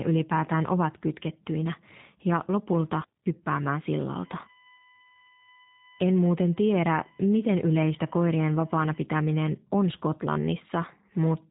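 Throughout the clip the speech has passed through the G.729 codec, which fits an 8 kbit/s G.729A link that rebuilds each frame from a vocal tract filter, pitch predictor and a few pulses. Nothing above 3.8 kHz survives, so the speech sounds muffled, slightly rough and plainly synthetic.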